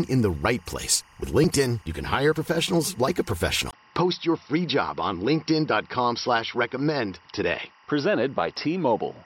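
A faint, steady chirping warble sits behind the speech for the whole clip, switching between pitches near 1 and 2 kHz at roughly 35 dB below the voice. This is timecode bleed: linear timecode running at 24 frames per second has leaked in from a neighbouring track or cable. At 3.71 s there is a silence of about 20 ms, and from then to the end the speech turns duller, with nothing above 5.7 kHz and a new background hiss roughly 45 dB down, while the loudness stays about the same. The likely cause is the input switched to a poorer device mid-recording, one with a narrower band and its own noise.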